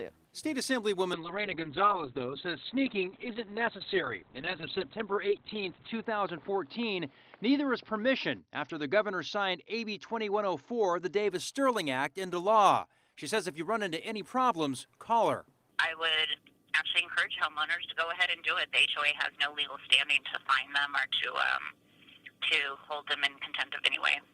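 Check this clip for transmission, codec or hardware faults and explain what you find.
There's one fault here, a call bitrate drop from 1.14 to 11.36 s. The encoder got starved of bits, so top end collapses from about 20 kHz to 4 kHz, sounding muffled and watery, which fits a fall to roughly 9 kbps.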